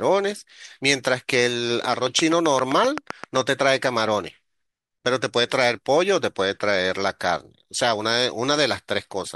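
From 1.94 to 3.37 s, a train of clicks cuts across the speech. About ten sharp ticks arrive at a steady 7.7 per second. Each has much the same shape and stands well above the speech. Interference from nearby equipment is the likely source.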